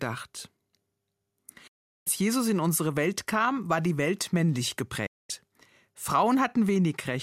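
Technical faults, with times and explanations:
1.67–2.07 s and 5.06–5.30 s, digital broadcast dropout: the receiver lost valid frames and muted, so the speech fades out within about 8 ms and is gone for 0.4 s and 0.24 s.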